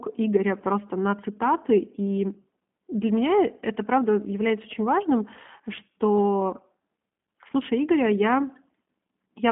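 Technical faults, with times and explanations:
Throughout: G.729 codec damage, plainly audible. The speech sits in a telephone band, 150 Hz to 3.5 kHz, with nothing above 3.6 kHz. It is rebuilt from a filter, pitch predictor and sparse pulses, so it sounds rough and synthetic. This fits an 8 kbit/s G.729A coder.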